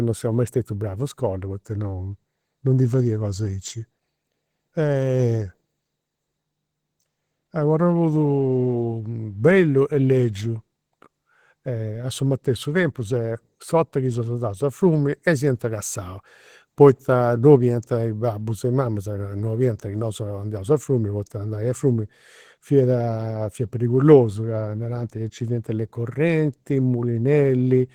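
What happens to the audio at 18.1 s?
Opus compression is audible at 18.1 s, as it is throughout the clip. The speech sounds muffled, hoarse and grainy, which fits a rate around 16 kbps, likely with the encoder in its hybrid speech mode, filling starved bands with folded or noise-like content.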